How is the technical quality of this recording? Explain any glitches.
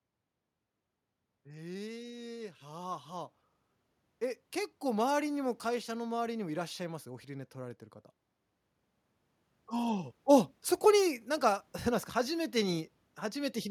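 The recording has two stretches where the level climbs on its own. Automatic gain rising occurs from 1.46 to 3.37 s and again from 4.19 to 7.87 s: the gain control judged the input too quiet and eased its amplification upward, by about 5 dB in the first stretch and about 7 dB in the second. The speech and the background noise beneath it swell together, so the room seems to creep closer rather than the talker simply getting louder.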